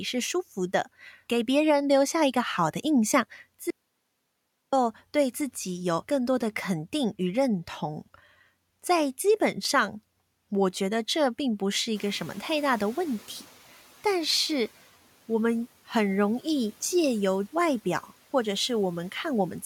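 From 3.70 to 4.73 s the signal drops out to silence for about 1.0 s. The gap is silent with no room tone, so the speech cuts off and resumes abruptly. The likely cause is a momentary loss of the input, such as a disconnect or mute, while recording continued.

At around 12 s the room noise jumps by about 16 dB, settling about 26 dB below the speech. The noise suppressor is catching up from 11.95 to 13.55 s: the louder noise first passes with less reduction, then sinks by about 6 dB over 1.6 s as its estimate adapts.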